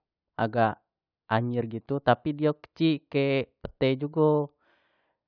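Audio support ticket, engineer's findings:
No faults found in this speech.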